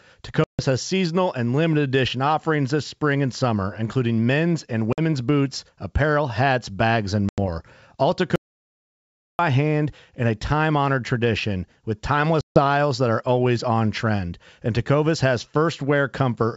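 At 0.44 s a hard-edged hole of about 150 ms opens, just before "has seasonal and limited". This is packet loss on an ADPCM call. Lost packets become silence. The decoder's predictor and step size then drift from the sender's, so speech returns slightly distorted. Similar gaps follow at 4.93 s (50 ms) and at 7.29 s (90 ms), after "apparel hats bags and".

From 8.36 to 9.39 s comes an audio dropout to silence lasting about 1.03 s. It is silent, with no room tone. The likely cause is a lost input or failed link. Speech resumes mid-flow at "hand in a time".

At 12.41 s another ADPCM packet loss of about 150 ms cuts in. It brings the same unsettled recovery.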